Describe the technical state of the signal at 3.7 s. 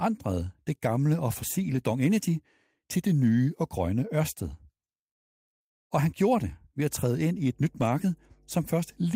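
At 3.7 s the speech signal is intact, with no audible dropout, clipping, distortion or other fault at that moment.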